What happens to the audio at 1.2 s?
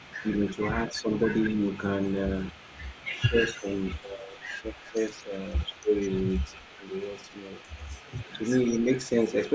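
Right around 1.2 s you're inside a stretch of speech suppressed in double talk, running from about 0.92 to 1.31 s. The talker's level sags by roughly 10 dB in patches adding up to around a fifth of a second, likely because an echo canceller couldn't separate this talker from the far side and pulled both down together.

Underneath that, an echo leak runs the whole clip. A faint copy of the speech trails about 190 ms behind, sitting roughly 25 dB down, which is likely a loudspeaker's output slipping past the echo canceller and getting sent back into the call.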